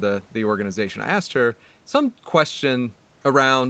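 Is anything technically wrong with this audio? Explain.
No, nothing technically wrong can be heard in this speech clip. It has passed through a normal call path, with microphone processing and an Opus codec at a bandwidth that leaves nothing above 8 kHz, so the speech sounds narrower than full-band audio, as expected for a call.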